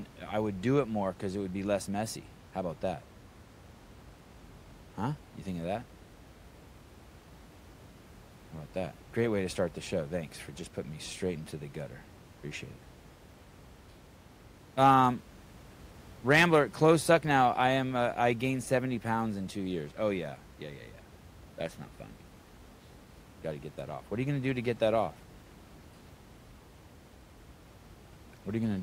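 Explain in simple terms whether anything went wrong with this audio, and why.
Nothing went wrong with the recording itself: the speech comes through steady and intact, and the only other thing you can hear is the quiet background noise of the room, which sits well below the voice and is part of the space where it was recorded.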